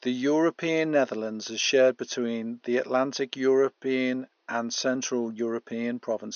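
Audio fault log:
No fault to log in this audio.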